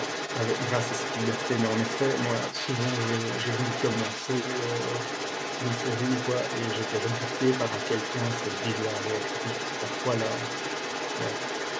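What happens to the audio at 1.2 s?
At 1.2 s a second voice sits under the main speech, only a little quieter, and it runs from 0 to 11.8 s. This is the other side's voice leaking through, likely because the echo canceller left far-end loudspeaker sound in the microphone signal.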